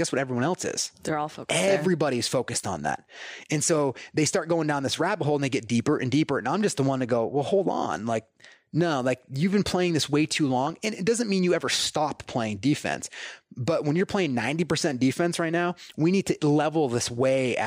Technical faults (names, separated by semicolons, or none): DAB burbling